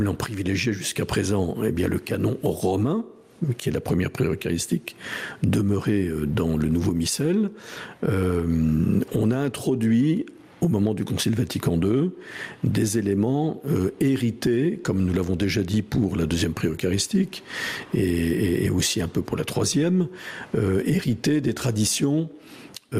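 The level swings by about 20 dB and the whole clip sounds squashed throughout. This gain pumping is likely caused by input gain set far too high, with a fast limiter or compressor clamping down on every peak.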